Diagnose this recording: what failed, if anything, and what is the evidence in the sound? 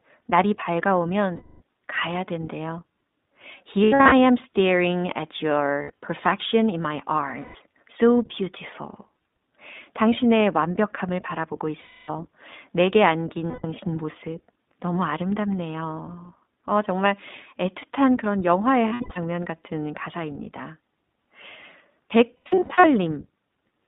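The speech is confined to a narrow telephone band, roughly 200 Hz to 3.7 kHz, with nothing above, and carries a plainly audible rough, slightly synthetic texture throughout. This is the codec stage: the iLBC codec. It codes the excitation of each 20 ms frame independently and discards everything outside the narrowband channel. That rebuilds speech intelligibly but coarsely, which fits its 15.2 kbps mode.

At the network stage, the audio repeatedly turns into a held, buzzy or breathy vowel-like sound and then snaps back to normal speech almost at once. This happens at 1.36–1.62, 3.84–4.13, 5.82–5.92, 7.40–7.56, 11.80–12.10, 13.50–13.66, 18.88–19.18 and 22.37–22.85 s. These are lost iLBC frames. The decoder replayed the last pitch cycle mixed with noise, fading it as each gap lengthened. The gaps range from 100 to 340 ms of missing audio. Several are scattered bursts with runs of about a tenth of a second or less. 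Recovery is quick because each iLBC frame stands alone.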